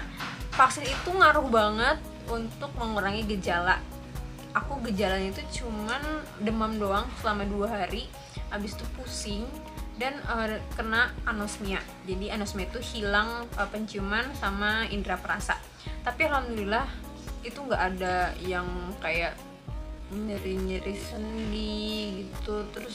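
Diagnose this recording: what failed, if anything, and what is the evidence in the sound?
A time-stretched section runs from 19.51 s to the end at 22.95 s, played at 0.53 times the original speed. The pace drops abruptly to roughly half while the pitch holds, most likely from software time-stretching at the editing or storage stage, which fills the extra length by repeating short pieces. On a spectrogram, harmonic lines stay at the same frequencies, but each event stretches to nearly twice its width. The waveform shows repeated short segments.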